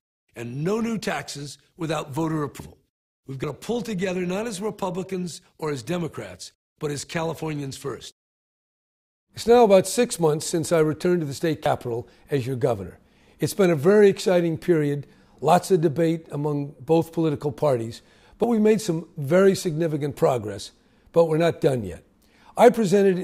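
At 2.60 s the audio jumps abruptly, skipping roughly 150 ms of material; similar but shorter jumps of about 50 ms follow at 3.44 s, 11.66 s and 18.44 s. The likely cause is a dropped buffer (overrun), where samples were overwritten before being read and the surrounding audio was spliced together. The waveform shows a sudden discontinuity with no gap, and the spectrogram shows a thin vertical broadband line at each splice.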